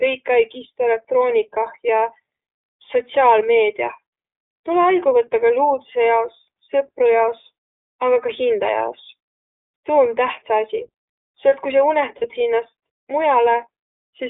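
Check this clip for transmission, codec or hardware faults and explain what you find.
There are two faults here: iLBC codec coding across the whole clip, and one short patch of lost iLBC frames near the end.

The iLBC codec is on throughout. The speech sits in a narrow telephone band, roughly 300 Hz to 3.6 kHz, and has a plainly audible rough, slightly synthetic edge. Each frame's excitation is coded independently at a low rate, which fits iLBC's 15.2 kbps mode with 20 ms frames.

The lost iLBC frames run from 12.18 to 12.25 s, about 40 ms, which fits two dropped 20 ms frames. The decoder covered the gap by repeating the last pitch cycle blended with noise, so you hear a brief held, buzzy vowel. The speech snaps back right afterwards because the next frame decodes on its own.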